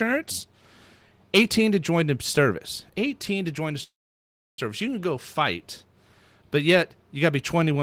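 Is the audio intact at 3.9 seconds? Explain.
No. A call audio freeze spans 3.83 to 4.60 s, likely from delayed packets draining the jitter buffer. The last sound fades into about 0.67 s of silence. Then the speech resumes where it stopped, with nothing lost, and everything after runs 0.75 s late.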